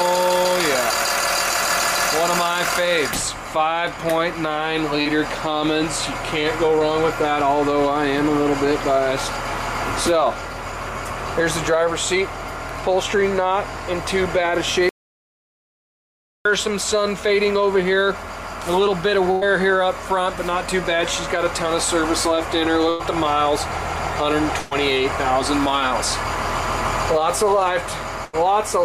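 The audio carries network and input faults. There is one short concealed packet loss at about 5.01 to 5.07 s. Roughly 40 ms of audio never arrived in time. The receiver patched about 37 ms by extending the last sound, from its pitch if voiced or as shaped noise if not. It then blended back into the real signal. The result is a brief smear or wobble, and a short sound there may be lost. From 14.89 to 16.45 s there is an audio dropout to silence. The sound cuts out and returns mid-flow, and about 1.56 s is lost. The gap holds no room tone at all. The likely cause is lost input, such as a disconnected device, a failed link or a stray mute, while recording carried on writing silence. Later come four bursts of packet loss. They fall at 19.31 to 19.43 s, 22.89 to 23.01 s, 24.59 to 24.73 s and 28.25 to 28.35 s. Each gap was filled for about 82 to 116 ms. The audio actually missing was 100, 100, 120 and 80 ms respectively. 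In each gap the receiver continued the last sound and turned it down. A voiced sound becomes a held buzz, and other sounds a fading hiss. The audio then picks up further on, with the part in between gone.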